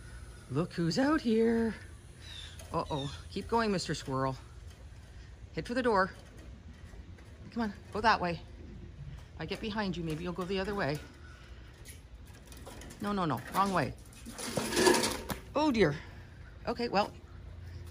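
No technical faults are audible.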